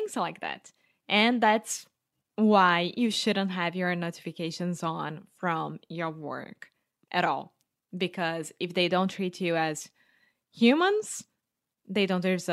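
No technical faults can be heard anywhere in the speech. At no point does the recording reveal a moment where the signal chain went wrong.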